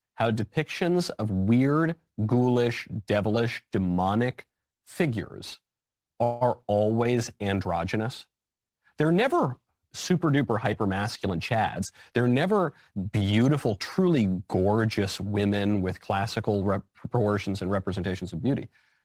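At 6.23 to 6.43 s the speech stalls into a fading buzz for 176 ms, a call audio freeze, likely from delayed packets emptying the jitter buffer; nothing is lost.

From 11.28 to 13.31 s a jitter buffer speed-up trims repeated pitch-period slices, about a fifth of a second in total, so speech runs 108% fast at unchanged pitch.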